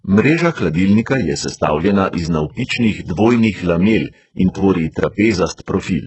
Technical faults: HE-AAC compression

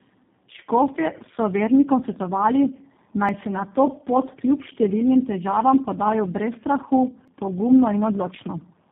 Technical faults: tandem speech coding; audio missing between chunks

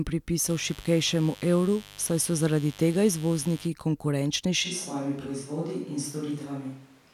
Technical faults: mains buzz; switch to a distant microphone

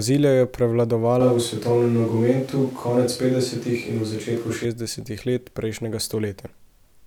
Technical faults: switch to a distant microphone

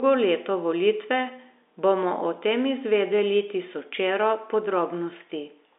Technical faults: none

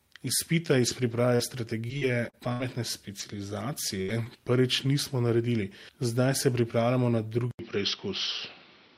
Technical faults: repeated packet loss (robotic sound); input switched to a poorer device

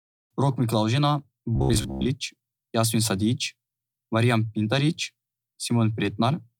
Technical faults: robotic sound from repeated short buffers

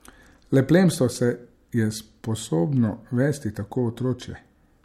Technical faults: none

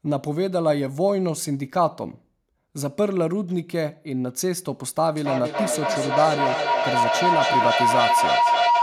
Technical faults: feedback howl

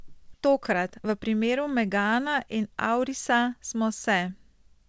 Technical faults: skip ahead; jitter buffer speed-up

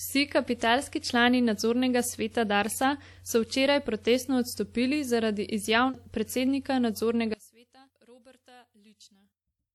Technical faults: one channel inverted

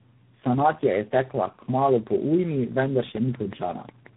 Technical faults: tandem speech coding; train of clicks

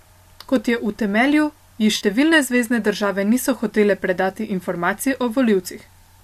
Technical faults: AAC frame loss with concealment

